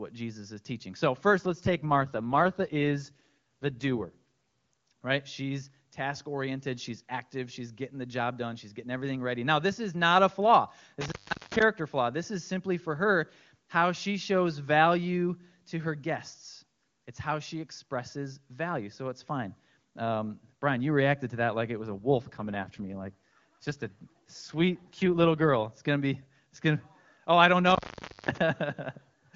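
Speech over HD Voice with two kinds of fault. From 1.38 to 4.10 s, and again from 21.81 to 25.66 s just after "to that like it", the voice turns rough and synthetic while the bandwidth holds and nothing drops out. This is an AMR rate drop. A weak radio link pushed the wideband codec down from its clean top rate, which fits 23.85 kbit/s, to a level consistent with 8.85 kbit/s, with more of the bits spent on error protection. At 11.01 to 11.62 s, after "is not a flaw", and at 27.66 to 28.38 s, after "gonna oh I don't", the sound cuts out with crackle at each edge. Faint hiss remains for about 0.40 s and 0.53 s. These are intermittent contact faults, where a loose plug or cable briefly opens the line.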